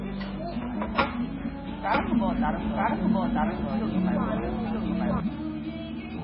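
From start to end the sound carries heavy MP3 compression damage. Nothing exists above 5.4 kHz, so the treble is cut flat and the sound turns dull, watery and swirly, with metallic chirps on sharp, hissy detail and smeared attacks. That steep ceiling and the weak frequency lines flickering on and off point to a very low bitrate, around 16 kbps. On a spectrogram this shows as a hard horizontal edge at 5.4 kHz with patchy, blocky holes beneath it.

From 1.94 s to 5.2 s a doubled audio track appears. A second, full-band copy of the sound runs roughly one second behind the original at about the same level, likely from a second capture path or an edit that left two copies out of step. Events are heard twice, with no reverb tail or room colour on the repeat, and the copy switches on and off abruptly. A waveform shows each shape repeated about a second later, and a spectrogram shows identical patterns shifted along the time axis.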